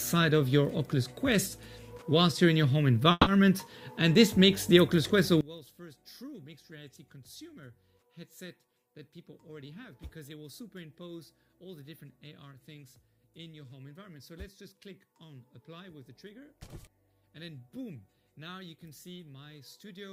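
At 3.11 s there's a call audio freeze lasting until 3.29 s. The last bit of sound gets stretched into a fading buzz or hiss for about 150 ms, then roughly 20 ms of silence, and the audio picks up right where it left off. That points to packets likely stalling in transit and the jitter buffer running dry. Nothing is actually lost, but everything after this point now arrives about 150 ms later than before.

From 5.41 s all the way to the end, it sounds like one channel inverted. The centre of the mix collapses and the level drops by about 23 dB, leaving a faint residue of whatever differs between left and right. That's the classic result of one side likely having its polarity flipped, so the shared material cancels when the two channels are heard summed together.

Between 8.71 s and 10.87 s there's a jitter buffer speed-up. The audio runs at about 106% of normal speed with the pitch unchanged, so it comes across as slightly rushed. 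The receiver is trimming the backlog by cutting out tiny pitch-period-sized slices over and over, roughly 150 ms in total, to claw back the extra delay that built up in the buffer.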